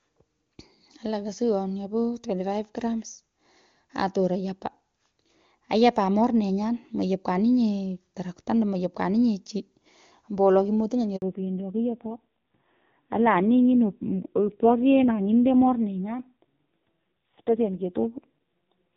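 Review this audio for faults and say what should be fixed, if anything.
At 11.16 s a handover gap cuts the speech for 60 ms, until 11.22 s. The signal dies within a few tens of milliseconds and stays silent while the call moves to a new network link, and whatever was said in that window is lost. A make-before-break handover with a jitter buffer and frame concealment across the switch would prevent it.

From 11.22 s to the end, the speech falls back to narrowband. Nothing above 4 kHz remains, and the voice becomes dull and rough. Before the switch, the HD Voice band is clear, consistent with AMR-WB near its top rate of 23.85 kbit/s. The raspiness afterwards points to a low AMR-NB mode around 5.9 kbit/s. Ensuring the target network supports AMR-WB, and negotiating it during handover, would keep the call wideband.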